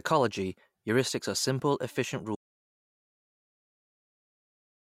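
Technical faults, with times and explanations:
2.36 s to the end: audio dropout to silence. The input feed was likely lost, through a disconnected device or a failed link, while the recorder kept writing silence. The speech cuts off mid-flow into about 2.5 s of total silence with no room tone, and never returns.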